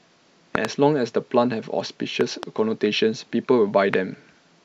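Loud pops break through the speech three times: a double pop at 0.55 to 0.67 s, around 20 dB above the speech, another double pop at 2.21 to 2.45 s, and a single one at 3.94 to 3.96 s. Both later ones are around 15 dB up. The speech continues underneath. A voltage pulse from a plug, switch, static or driver glitch is the likely cause.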